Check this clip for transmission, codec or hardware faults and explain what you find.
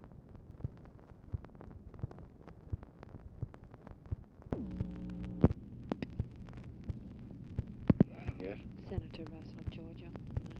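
Two brief skips stand out, at 0.51 s and 4.51 s. Each is a jump in the sound, likely a dropped buffer (overrun) losing roughly 20 ms and 10 ms. The waveform shows a sudden discontinuity, and the spectrogram shows a thin vertical broadband line.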